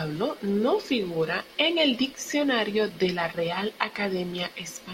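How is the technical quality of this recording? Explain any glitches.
No glitches or technical faults.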